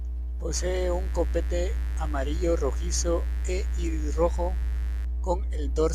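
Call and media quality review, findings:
Steady, raspy mains buzz under the speech, 0.54 to 5.05 s, about 25 dB below signal level. Probable component: dimmer, rectifier or unshielded cable near the chain. Sharp switching spikes twice per 50 Hz cycle, giving a harmonic series up into several kHz.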